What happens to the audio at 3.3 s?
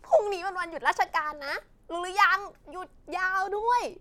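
Nothing goes wrong at 3.3 s; the audio runs through that moment intact, with no break, distortion or dropout.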